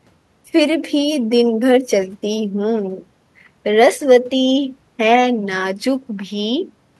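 A speech recording with no audible technical faults.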